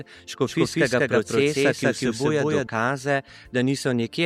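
From 0.47 s to 2.67 s there is a doubled audio track. A second full-band copy trails the original by about a fifth of a second, at roughly equal loudness. It has no decay or room colour and starts and stops abruptly. A slower capture path likely recorded it twice.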